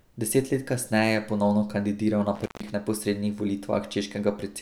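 Intermittent contact between 2.35 and 2.70 s in this speech recording: a loose connection opens for about 146 ms, dropping the signal to faint hiss with crackle at each edge.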